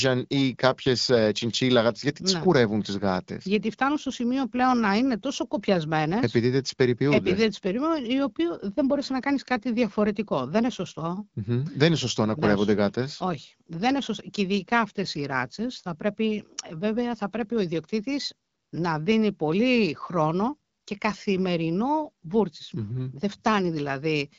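No technical faults can be heard in the speech. It comes through the AMR wideband (HD Voice) codec at 12.65 kbit/s, which leaves light coding traces and no content above 7.5 kHz.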